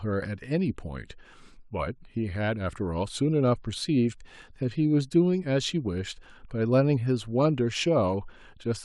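No technical faults can be heard anywhere in the speech. There is nothing in the audio that calls for comment at any point.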